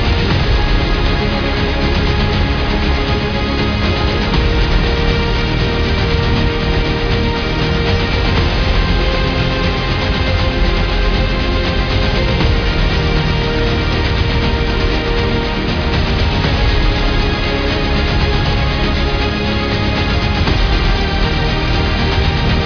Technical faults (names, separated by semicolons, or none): none